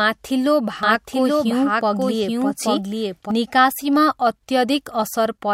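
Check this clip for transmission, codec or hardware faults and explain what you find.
A doubled audio track runs from 0.83 s to 3.31 s: the speech is overlaid by a second, equally loud copy trailing around 0.7 s behind, dry and full-band, switching in and out abruptly. This is likely a second, slower capture path or an edit leaving two copies out of step.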